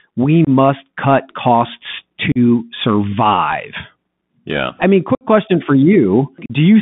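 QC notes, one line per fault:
Throughout, Bluetooth CVSD headset codec: The sound is held to about 150 Hz to 3.6 kHz. That is a narrowband line consistent with a 64 kbps CVSD link. Each sample is a one-bit step up or down with adaptive size. Fast, bright sounds outrun it, leaving plainly audible grit and hiss.
0.45 s, 2.32 s, 5.15 s and 6.46 s, unconcealed Bluetooth headset packet loss: The sound drops out with abrupt edges for 22.5, 37.5, 60 and 37.5 ms. The first comes just before "cut costs" and the second just after "cut costs". The third falls between "I mean" and "question for". In each, a few short radio packets were lost, and nothing filled the gap.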